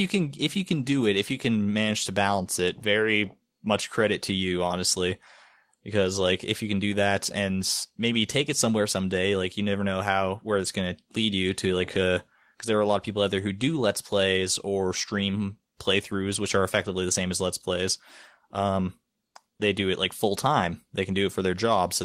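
From 19.27 to 19.35 s, an 80 ms stretch of the pause has comfort noise in place of the background. The faint room sound, already about 55 dB below the loudest passages, gives way to a flat, featureless hiss roughly 20 dB quieter, then the original background returns. The likely cause is discontinuous transmission, as in Opus DTX: the sender stopped transmitting during the silence, and the receiver filled the gap with synthetic noise lacking the real background's texture.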